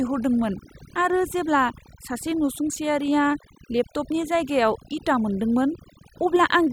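A speech recording with overdone noise removal running for its whole length. The background has been pushed to near silence, yet small twinkling specks keep flickering through it, and the voice loses its quieter frequency bands along with the noise. A noise gate would cut the whole signal at once between phrases; here individual bands drop out independently, which produces that sparkling quality rather than clean on-off gaps.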